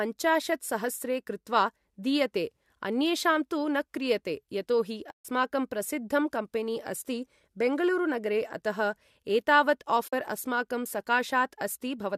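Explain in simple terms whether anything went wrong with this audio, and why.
Some of the compressed audio data never arrived, a fault called AAC frame loss with muting. The decoder filled each gap with silence, and its overlapping windows faded the speech out and back in, leaving soft-edged holes. The first gap runs from 5.11 to 5.25 s (about 140 ms), and the second from 10.08 to 10.13 s (about 50 ms). Their lengths fit short frames of roughly 10 ms each, likely from low-delay AAC compression.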